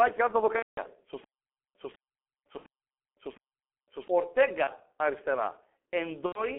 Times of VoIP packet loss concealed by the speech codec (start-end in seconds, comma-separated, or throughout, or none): 0.56-0.81, 2.57-2.65, 4.64-4.70, 6.26-6.44